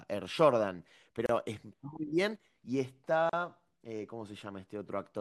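A speech recording with two gaps at joins of encoded pieces, at 1.26–1.29 s (32 ms) and 3.29–3.33 s (38 ms), spaced 2 s apart. Each piece kept its encoder start delay and end padding, so speech drops out and resumes where it stopped. A waveform shows a flat silent stretch with smeared edges, and a spectrogram shows a narrow blank band across all frequencies.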